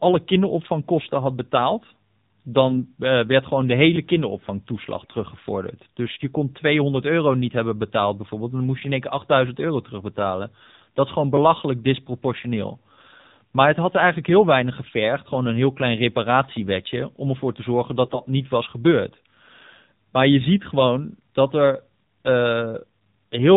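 Throughout, the voice sounds thin, buzzy and somewhat synthetic, with nothing above 4 kHz and a plainly audible processed edge to every syllable. This is the AMR narrowband mobile codec: the audio is squeezed through 8 kHz sampling and rebuilt from a vocal-tract model excited by 2 to 10 pulses in each 5 ms, and the degree of buzziness fits one of the lower modes, around 7.4 kbps.

At 2.66–2.82 s and again at 4.98–5.15 s the voice briefly turns hoarse and scratchy while keeping its pitch and loudness. A harsher, gargly burst follows at 18.04–18.20 s, between "om ervoor te zorgen" and "niet was gebeurd". These are AMR bit errors. Some of the less protected bits in a run of frames arrived flipped, misplacing the excitation pulses and skewing the finer gain and spectral values. The errors were light in the first two bursts and noticeably denser in the third.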